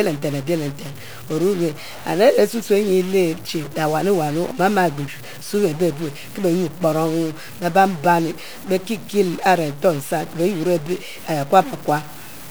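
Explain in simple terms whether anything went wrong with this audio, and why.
A single data bit in the audio's digital values was likely stuck at one setting, a stuck bit, adding harsh, buzzy distortion to the speech throughout and filling its pauses with noise.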